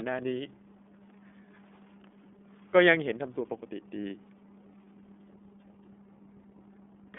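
From start to finish the speech carries iLBC codec damage. Nothing above about 3.8 kHz survives, and the band starts near 200 Hz. Each frame is coded alone, here in the 30 ms, 13.3 kbps mode. The damage is plainly audible, and the voice sounds a little rough and synthetic.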